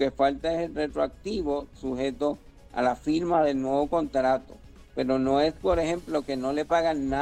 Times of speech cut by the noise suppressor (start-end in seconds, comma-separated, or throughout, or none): none